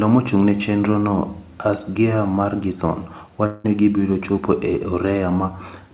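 A long network dropout hits this speech recording from 3.46 to 3.66 s. About 180 ms of audio is missing, and the gap is filled by a fading buzz or hiss continuing the preceding sound rather than silence, likely a receiver concealing lost packets. The call codec's band limit is audible throughout, with nothing above 4 kHz, consistent with G.711 A-law.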